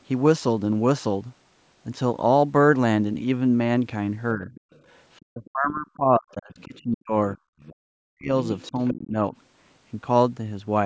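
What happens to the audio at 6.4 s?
Both sides were likely talking at once from 5.24 to 7.38 s. This is speech suppressed in double talk: the echo canceller turned the talker down along with the echo, pulling the speech down by up to around 40 dB for about a second and a half in total. From 6.3 to 6.81 s, the canceller also likely failed to remove all of the loudspeaker signal, so the other side's voice leaks through faintly, roughly 30 dB below the talker.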